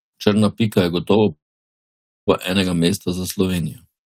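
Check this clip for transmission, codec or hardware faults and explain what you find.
One transmission fault is present in this speech clip: a long network dropout from 1.31 s to 2.29 s. The speech stops, and the last sound is briefly carried on as a fading buzz before giving way to about 0.89 s of silence. Speech then resumes, with roughly 0.96 s of it missing. The likely cause is a run of packets that never arrived, so the receiver's concealment filled the gap and the lost audio was never played.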